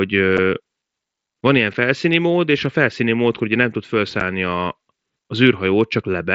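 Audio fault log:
0.37 s, 1.74 s and 4.2 s, unconcealed Bluetooth headset packet loss: brief holes with abrupt edges, each a single lost headset voice packet of about 7.5 ms replaced by silence or an idle pattern; the second falls between "van ilyen" and "mód és a felszíni", the third just after "mód hogy nem tud".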